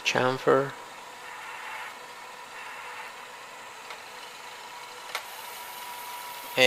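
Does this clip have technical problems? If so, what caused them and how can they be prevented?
No, there's nothing here to diagnose, so there's nothing to prevent.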